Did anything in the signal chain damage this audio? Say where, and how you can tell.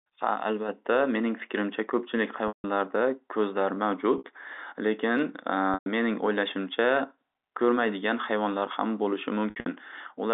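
Yes, at the network stage there is packet loss with pitch repetition at 2.48–2.64, 4.18–4.24, 5.74–5.86 (before "mening o'ylashimcha") and 9.50–9.66 s (after "ko'rmaydigan hayvonlar ham bo'lishi"). The receiver loops the last pitch cycle, so the waveform shows identical repeated periods and the spectrogram shows frozen, fading harmonics, sounding like a held buzz on the short gaps and fading into silence on the longer ones.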